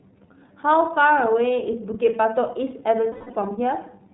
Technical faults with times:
0.00-4.14 iLBC codec
3.12-3.37 lost iLBC frames

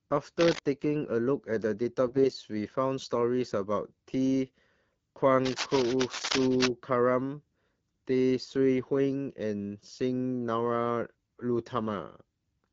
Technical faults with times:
0.39-0.59 cable scratch noise
2.07-2.29 AMR bit errors
5.45-6.68 cable scratch noise

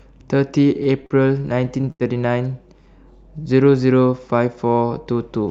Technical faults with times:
0.83-2.03 repeated stalls (stutter)

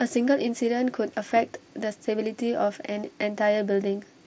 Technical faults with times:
none

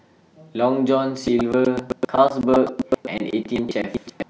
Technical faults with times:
1.15-4.29 buffer tearing

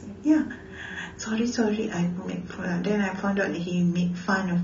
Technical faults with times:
1.18-4.63 adaptive stream at a lower bitrate

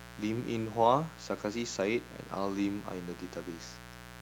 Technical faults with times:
0.00-4.21 mains buzz

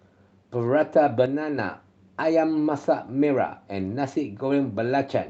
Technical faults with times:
1.26-1.58 one channel drops out

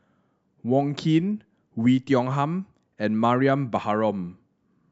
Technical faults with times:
none

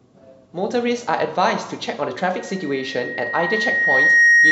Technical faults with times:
2.36-4.51 loudspeaker feedback squeal

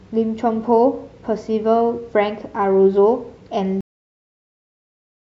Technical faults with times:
3.81-5.21 cut-off end

